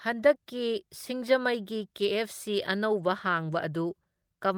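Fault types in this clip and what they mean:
No technical fault can be heard anywhere in this speech recording; the signal stays intact and continuous throughout.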